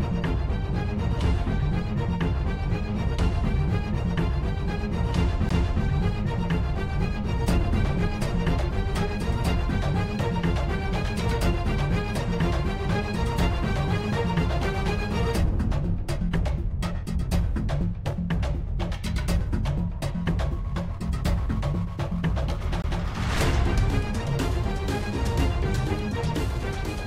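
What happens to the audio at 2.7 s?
Nothing goes wrong at 2.7 s; the audio runs through that moment intact, with no dropout, click or distortion.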